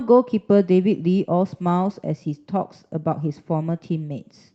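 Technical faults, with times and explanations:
No technical faults are audible.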